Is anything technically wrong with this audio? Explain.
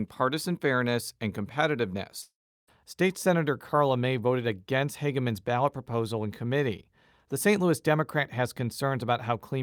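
Yes. Long network dropout, 2.21 to 2.69 s: the speech trails into a fading buzz, then silence, likely because packets stopped arriving, so about half a second is lost.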